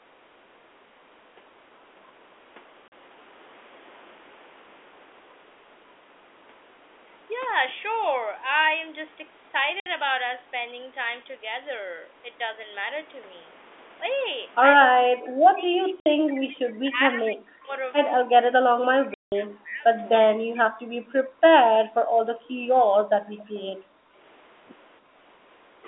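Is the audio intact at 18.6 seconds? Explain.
No. Speech suppressed in double talk runs from 18.24 to 21.46 s. The speech dips and breaks into pieces, dropping at its deepest by roughly 40 dB, with around two seconds of the span affected in total. This is likely the echo canceller mistaking the near talker for loudspeaker echo while both sides talk at once, and turning everything down. The speech stays band-limited to the telephone line, as it is throughout the call.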